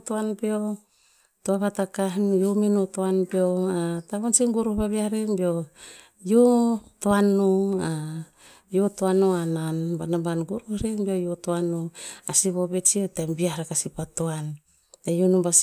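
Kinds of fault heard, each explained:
No fault of any kind can be heard in this speech recording, and the signal holds steady throughout without a dropout, distortion or other technical disturbance.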